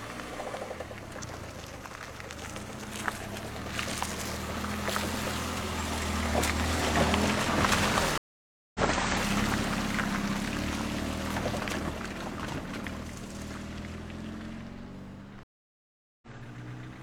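Stream reconnects at 8.18 to 8.80 s and 15.43 to 16.28 s interrupt this recording of sounds. Each time the connection dropped, leaving silences of 0.57 s and 0.79 s, then a fresh decoder resumed mid-stream, skipping ahead by roughly a third and then half a second.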